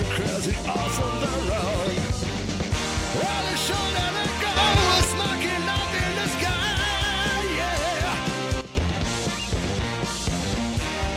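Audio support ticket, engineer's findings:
Sudden gain jump, likely a gain setting applied in the digital chain without a ramp. Level and noise floor step up together by about 6 dB at 4.57 s, held to 5.04 s; step down by about 12 dB at 8.61 s, held to 8.75 s.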